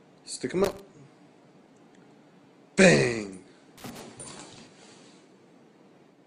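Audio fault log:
0.64–0.80 s and 3.78–4.00 s: loose connector crackle. A worn or dirty contact making and breaking contact chops the signal into irregular fragments, heard as bursts of scratching crackle. A spectrogram shows clusters of broadband vertical streaks, and the waveform shows a broken, gated envelope.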